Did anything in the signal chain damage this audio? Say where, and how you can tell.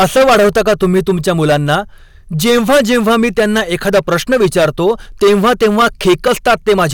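Yes. The level feeding a converter or fixed-range stage was set about 15 dB too hot, so hard clipping runs through the whole speech clip from start to finish. Roughly a tenth of the samples hit the ceiling and have their peaks sliced flat. Those squared-off tops generate high harmonics that were never in the original, which is why every louder syllable carries a harsh, buzzy fuzz rather than only occasional crackle on isolated peaks.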